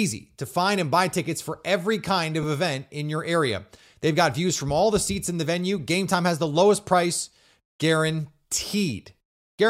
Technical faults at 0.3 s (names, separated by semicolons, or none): none